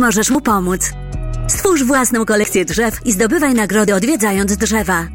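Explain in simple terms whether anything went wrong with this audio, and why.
There are four little skips, at 0.35, 1.65, 2.44 and 3.88 seconds. Each one is a spot where the sound jumps forward instead of pausing. The one at 2.44 s is the biggest, losing something like 70 ms; the others drop around 20 ms each. That pattern points to a likely dropped buffer (overrun): the recording software didn't grab its chunk of audio in time, the hardware overwrote it, and the two ends got stitched together.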